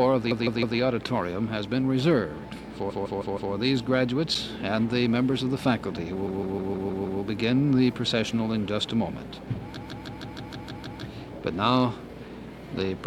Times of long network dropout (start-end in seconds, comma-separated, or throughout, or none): none